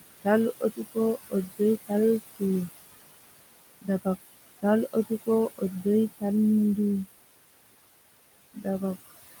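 From the start, the noise suppressor artifacts are there the whole way through. The room noise, sitting about 13 dB under the speech, gets pushed down by about 19 dB in the gaps and swells back under the talking.

Between 0.6 and 0.97 s there's speech cut by the noise suppressor. It mistook some quiet speech for background and dropped it by as much as about 21 dB, so around a tenth of a second sounds swallowed and faint.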